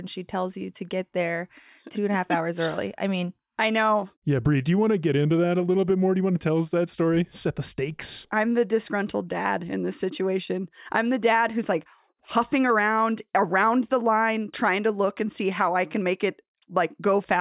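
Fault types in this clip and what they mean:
No technical faults can be heard anywhere in this recording.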